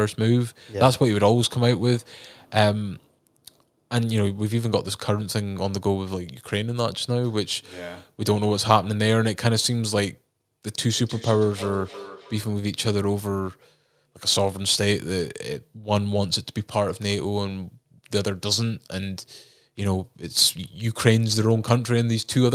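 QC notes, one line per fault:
10.94–12.64 s, feedback echo between two devices: the speech returns as a delayed copy at a steady interval of roughly a third of a second, peaking about 15 dB below the direct speech. A second device in the same room is playing this call aloud, and this microphone picks that playback up again. The local echo canceller only subtracts what its own speaker emits, so the copy from the other device passes through and sounds thinner and more ringing.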